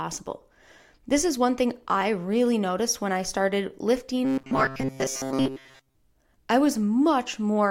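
From 4.25 s to 5.95 s the speech turns into robotic sound from repeated short buffers: the voice becomes a rigid, metallic buzz locked at 133 Hz that only loosely tracks the words. The likely cause is audio arriving too seldom, so the player loops a fragment of about 7.5 ms in place of most of the missing material. On a spectrogram this shows as evenly spaced horizontal stripes at multiples of 133 Hz; the waveform shows identical short cycles repeating back to back.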